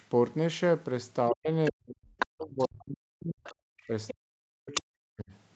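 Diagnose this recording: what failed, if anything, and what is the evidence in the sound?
The stage here is call processing, specifically the echo canceller, and the fault is speech suppressed in double talk. From 1.31 to 3.45 s and again from 3.87 to 5.32 s, the talker's level keeps dipping in chunks, at worst by about 40 dB, for roughly a second and a half in the first stretch and about a second in the second. The likely cause is the canceller hearing both sides at once, failing to separate them, and clamping everything down.

The same stage is also letting the other side's voice leak through, with a second voice that shouldn't be there. It shows up in short scraps at 1.65–1.71 s (about 15 dB under the talker), 2.18–2.27 s (about as loud as the talker), 2.59–2.68 s (about 25 dB down) and 4.74–4.81 s (about 5 dB down), plus a longer stretch at 3.44–4.13 s, about 15 dB down. That's likely loudspeaker pickup the canceller didn't fully subtract. 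The top end stopping around 8 kHz comes from the Opus call path.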